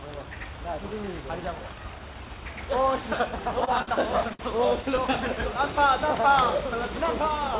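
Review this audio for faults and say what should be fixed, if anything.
Three short stalls from a late packet occur, at 3.65 s (held 20 ms), 3.82 s (53 ms) and 4.33 s (58 ms). Each time the jitter buffer ran empty, so the last sound was stretched until the packet arrived, with nothing lost. A spectrogram shows flat, smeared bands there, and the waveform repeats one cycle. A deeper or adaptive jitter buffer, or steadier network delivery, would prevent these stalls.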